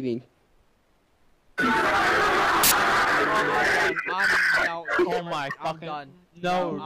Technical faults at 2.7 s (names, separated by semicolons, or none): samples built from the wrong bytes